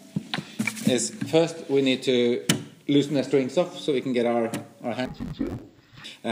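Interleaved audio read as planar runs from 5.05 to 6.05 s. Each 10.88 ms block of alternating left-right samples is split into halves and played as two half-speed channels. With such short blocks, the sound turns dull and robotic, buzzing at about 92 Hz.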